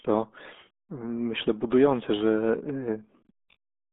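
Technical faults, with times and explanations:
Throughout: RealAudio 14.4 codec. Speech is confined to roughly 250 Hz–3.6 kHz, nothing above 3.8 kHz, with heavy gargling smear that fits an 8 kbit/s dial-up codec.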